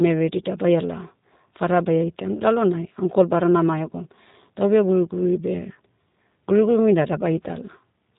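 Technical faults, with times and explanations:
Throughout: G.729 codec. The speech is rebuilt from a vocal tract filter, pitch predictor and sparse pulses, leaving it plainly rough and synthetic. Nothing passes above 3.8 kHz, which fits an 8 kbit/s telephone-band stream of this kind.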